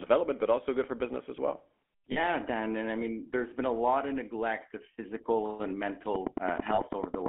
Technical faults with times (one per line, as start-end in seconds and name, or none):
0.00-7.29 GSM full-rate codec
2.12-2.19 lost GSM frames
6.15-7.27 train of clicks
6.74-6.82 lost GSM frames